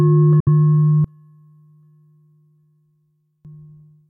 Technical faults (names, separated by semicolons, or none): Bluetooth dropout; one channel inverted